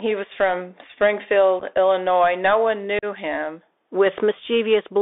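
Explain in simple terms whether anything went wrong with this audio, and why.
The whole clip went through a Bluetooth CVSD headset codec, the old narrowband phone-call link. Everything above about 3.6 kHz is cut off, so the speech sounds thin and muffled, s sounds turn scratchy, and a grainy hiss sits underneath the talking.

There's also unconcealed Bluetooth headset packet loss, where small chunks of sound never made it from the headset. Around 1.59 to 1.63 s it drops out in a few tiny bits, giving a brief rough stutter. At 2.99 to 3.05 s a longer hole appears, and the speech comes back a little quieter for a moment.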